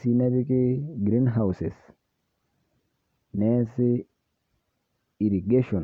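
No technical faults can be heard anywhere in the speech. The recording holds steady throughout, with nothing that interrupts or alters the sound.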